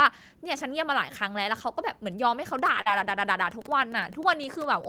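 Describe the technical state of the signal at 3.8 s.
At 3.8 s the signal carries Wi-Fi interference, present from 2.45 s to the end of the clip. A nearby Wi-Fi radio's transmissions are being picked up and rectified by the audio circuitry, so each beacon, repeating every 102.4 ms, becomes a short click in the audio path. The result is a steady ticking of close to ten per second, sitting roughly 25 dB below the speech and running continuously beneath it.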